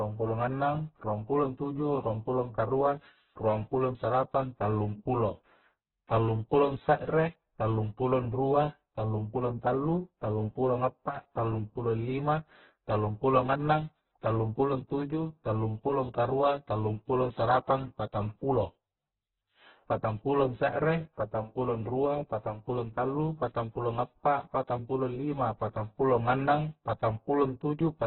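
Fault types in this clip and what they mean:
Opus compression: The speech sounds rough and grainy throughout, with tones turned noisy, and nothing is heard above 4.2 kHz, so the sound is confined to a narrow band. The cause is likely heavy Opus encoding at a very low rate, fitting roughly 8 kbps. With too few bits, the encoder keeps each band's energy but fills its detail with folded or noise content, producing graininess rather than swirl.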